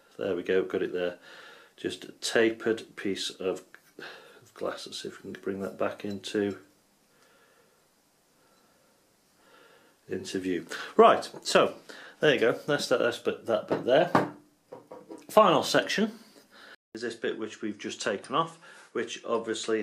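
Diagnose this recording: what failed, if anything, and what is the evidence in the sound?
At 16.75 s the waveform shows a 0.2 s gap, then the spectrogram stops at 11.4 kHz, level drops slightly and a faint new hiss appears. This is likely an input switched to a poorer device at the driver stage.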